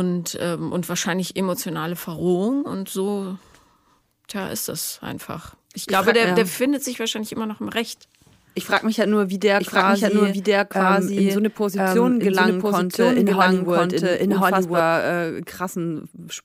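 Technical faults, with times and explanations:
9.60 to 14.80 s, doubled audio track: a second, full-band copy of the speech runs about a second behind the original at roughly the same level, so each phrase is heard twice and overlaps what follows. The copy is dry, with no decay or added room sound, and it cuts in and out abruptly at the ends of the span. The likely cause is the same signal being captured again through a slower path, or an edit leaving two copies out of step.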